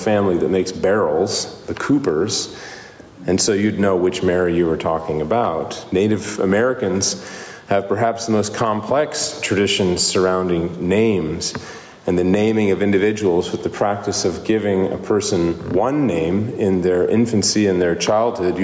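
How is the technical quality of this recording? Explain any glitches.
The recording has one persistent fault: gain pumping, present from start to finish. The level swings by about 10 dB. This is likely caused by input gain set far too high, with a fast limiter or compressor clamping down on every peak. Loud and soft passages end up squeezed together, so the sound feels flattened. The call-style microphone processing trims the deepest bass, and nothing reaches above 8 kHz.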